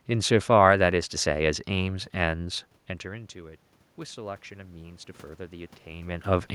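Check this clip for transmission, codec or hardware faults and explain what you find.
One fault turns up, automatic gain rising, from 1.85 s to 6.5 s. After the input level falls by about 19 dB, the gain control slowly pushes its gain up by about 8 dB, so voice and room noise swell together. A talker moving, as near 3 and 6 s, changes the voice level at the microphone rather than the gain.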